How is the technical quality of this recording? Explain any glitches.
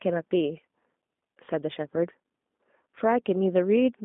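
Quality is limited by low-bitrate telephone coding throughout. A G.729 codec runs the whole way through, with the speech rebuilt from a vocal-tract model and sparse pulses, which fits 8 kbit/s. The result is plainly rough and synthetic, confined to roughly 200 Hz to 3.6 kHz, with nothing above 3.7 kHz.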